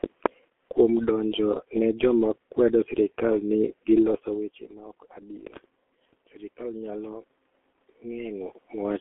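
From start to end, the speech passes through the G.723.1 codec. The band runs only from about 250 Hz to 3.4 kHz, so the voice sounds thin and muffled. The damage is heavy. Vowels turn hoarse and rough. Consonants smear together, because the codec works in 30 ms frames and updates its voice model slowly. The coarseness points to a rate near 6 kbit/s. The level shift around 4 s, where the talker moves, carries the same coding damage.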